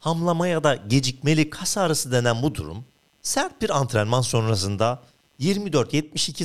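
A speech recording with computer activity noise running through its whole length: a faint buzzing, chirping texture pulsing at around 150 Hz and sitting roughly 45 dB below the speech. Processor, graphics or mouse load changes shift the ground shared with the audio circuit. Unlike mains hum, a steady tone locked to 50 or 60 Hz and its harmonics, this buzz swells and fades with what the computer is doing rather than staying constant or following the speech.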